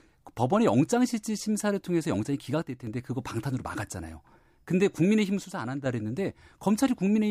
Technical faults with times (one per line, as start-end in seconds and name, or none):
2.62-2.87 one channel drops out
5.45-5.86 one channel drops out